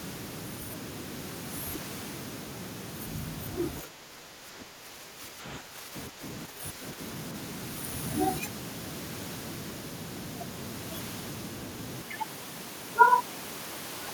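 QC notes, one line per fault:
3.82–6.22 s and 6.46–6.99 s, speech suppressed in double talk: the voice sinks by up to roughly 10 dB, likely because the echo canceller could not separate this talker from the far-end echo and attenuated both. The level recovers between 6.22 and 6.46 s. Unlike a plain dropout, it dips rather than falling to silence.
12.02–14.13 s, input switched to a poorer device: the sound abruptly turns dull and boxy, with a level drop of about 5 dB and a new noise floor about 30 dB below the speech. This points to a likely change to a narrower-band microphone or headset call profile. There is no gap at the switch, and the tone, level and noise all change together, which sets it apart from a codec's band limit alone.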